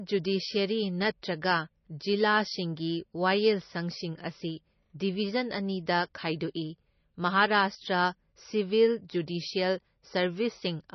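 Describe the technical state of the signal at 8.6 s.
At 8.6 s, as across the whole speech clip, the signal shows what is likely MP3 compression. Nothing survives above 5.9 kHz, and the heavy damage fits a bitrate around 24 kbps. Starved of bits, the encoder discards the treble and zeroes weak frequency lines that flicker between frames, leaving a watery, swirly texture and smeared consonant attacks. A simple low-pass filter would also remove the top, but it would not produce that shifting, chirpy residue.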